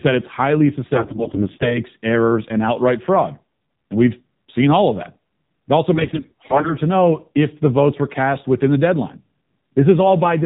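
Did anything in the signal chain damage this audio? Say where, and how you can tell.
Yes, two things, both in the codec and network stages. The whole clip has been through the AMR narrowband mobile codec. Nothing sits above 4 kHz, so the speech is boxed into the old phone band, and it has that buzzy, synthetic edge where a crude vocal-tract model is driven by only a few pulses per frame. The damage is plainly audible, which points to one of the low modes, something like 7.4 kbps.

On top of that there are AMR bit errors in two spots: 0.94 to 1.81 s, right after "that it's highly" and before "errors and outright fraud", and again from 5.94 to 6.78 s, just before "know if the votes". In both, pitch and level hold roughly steady but the voice goes hoarse, scratchy and gargly. That's a weak radio link flipping the less-protected bits, something like one in ten, so excitation pulses land wrong and the fine gain and spectrum values drift. 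The length of each patch fits a few dozen corrupted frames.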